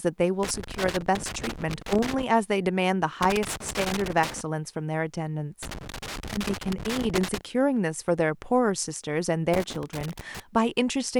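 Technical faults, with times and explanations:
0.43–2.23 s, 3.23–4.41 s, 5.63–7.41 s and 9.54–10.40 s: loose connector crackle. In each of these four bursts the speech is chopped by irregular crackling and scratching, as a worn or dirty contact in the signal path repeatedly makes and breaks, cutting the audio on and off in rapid, uneven fragments.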